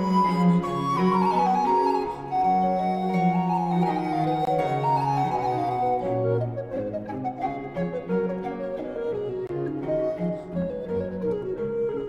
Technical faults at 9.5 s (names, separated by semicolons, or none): gap between chunks